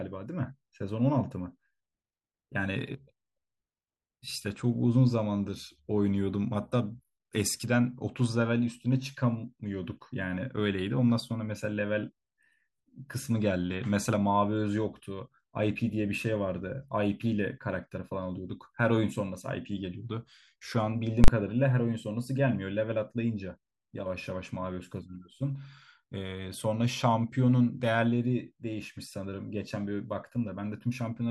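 It's a speech recording with one nasty glitch: invalid numbers at full scale, from 21.24 to 21.28 s. Somewhere in the processing a calculation blew up into infinite or invalid values, and those got turned into the largest positive or negative value, so the output sits flat at one extreme value, far beyond the speech peaks, for a 40 ms block. Because the block is that short, you don't hear a gap between two pops, just a single loud bang.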